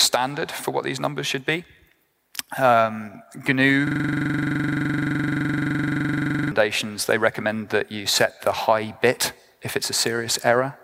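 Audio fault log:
3.87–6.52 s system hang loop: machine-gun stutter at 23.4 Hz as one 42.67 ms slice repeats; the system froze while hardware kept replaying what fits a 2048-sample buffer.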